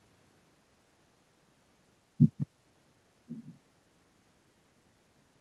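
Speech with an echo leak. From 3.28 to 3.57 s, a faint copy of the voice returns about 1.06 s late. A loudspeaker echo the canceller missed is likely.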